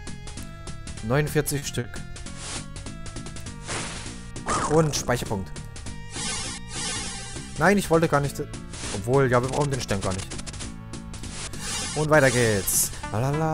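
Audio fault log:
1.58–1.65 s and 1.80–1.87 s: short stall from a late packet. Each time a packet arrived late, the jitter buffer ran dry and the receiver held the last sound for about 40 ms before continuing, with nothing lost. Each stall adds about 40 ms of delay. On a spectrogram the frequency bands stay flat through each hold. The waveform repeats the same cycle, and the result sounds like a brief sustain with a slight buzz or dip.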